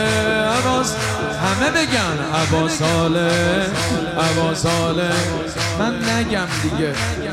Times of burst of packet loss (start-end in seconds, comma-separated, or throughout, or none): none